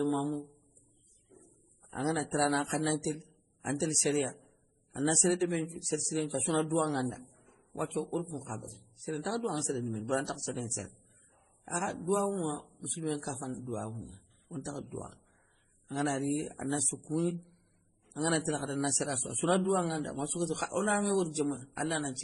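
From start to finish the speech carries two overlapping textures of compression damage, with nothing above 11.4 kHz. The likely cause is transcoding between lossy codecs: an MP3 stage followed by AAC-LC, each consistent with about 32 kbit/s. A single low-bitrate codec produces one consistent texture. Here, the second encoder spent its limited bits re-coding the first encoder's artefacts and then added its own, so two kinds of artefact are heard together.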